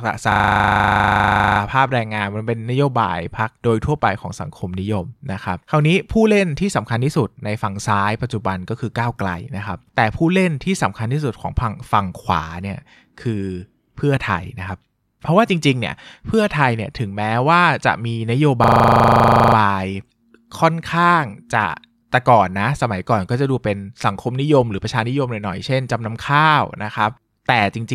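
From 0.32 to 1.6 s and again from 18.64 to 19.56 s, a system hang loop replays one 40 ms slice of speech at 25 Hz, a fast machine-gun stutter. Unlike a dropout, the sound repeats instead of going silent, which fits a stalled ring buffer.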